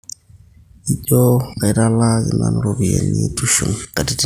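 No technical faults can be heard anywhere in the speech.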